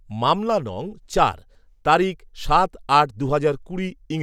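Nothing in the speech stood out as a technical fault on listening.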